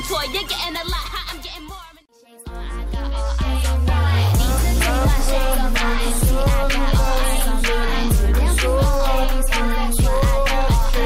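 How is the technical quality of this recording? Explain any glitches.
No glitches are audible anywhere in this recording.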